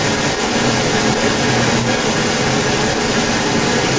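From 0.0 to 3.99 s there's an echo leak: a copy of the speech trails about 157 ms behind, roughly 5 dB louder than the original. Likely a far-end loudspeaker whose echo canceller let its mic pickup slip back into the call.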